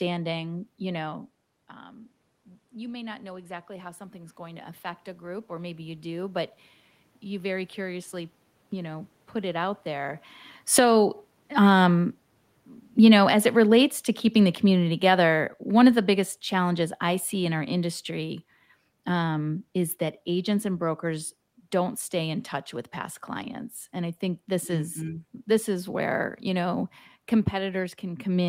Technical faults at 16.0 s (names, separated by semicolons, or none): automatic gain falling